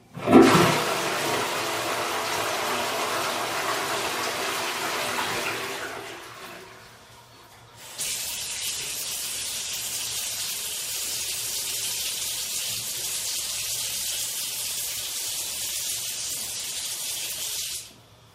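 No technical faults are audible anywhere in this recording.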